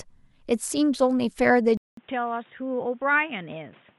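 Input switched to a poorer device at 1.77 s: after a 200 ms gap, the speech loses everything above 3.8 kHz, drops roughly 10 dB, and gains new background noise, likely from a different microphone.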